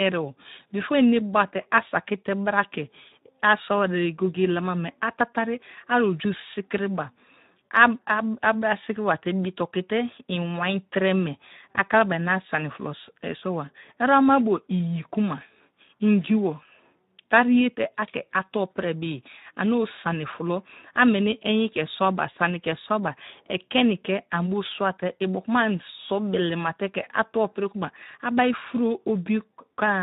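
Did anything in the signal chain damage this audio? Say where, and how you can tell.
Yes, at the codec stage: Speex codec damage runs the whole clip. The speech sounds hoarse and grainy, as a CELP coder with too few excitation bits would produce, which fits roughly 11 kbps. A transform codec would leave swirly, metallic artefacts instead.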